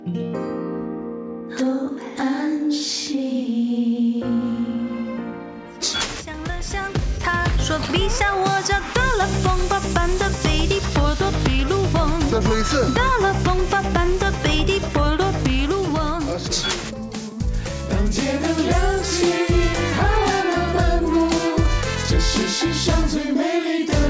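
No dropouts, glitches, clicks or other technical faults turn up anywhere in this recording, so there's nothing to flag along its timeline.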